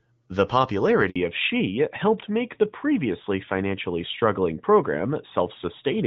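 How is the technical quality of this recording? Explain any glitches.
The recording is clear at first but has two glitches: a brief dropout and then a permanent loss of high frequencies.

Handover gap, 1.10 to 1.16 s: the speech fades out within a few tens of milliseconds and leaves 60 ms of silence. The call was passed from one network link to another, and no speech frames arrived during the switch, so whatever was said in that moment is lost.

Fallback to narrowband, from 1.16 s to the end: the voice suddenly turns duller and rougher, with nothing left above 4 kHz. The call dropped from HD Voice, whose light coding before the switch points to AMR-WB at about 12.65 kbit/s, to a narrowband codec consistent with AMR-NB at 12.2 kbit/s, which cannot carry the upper band.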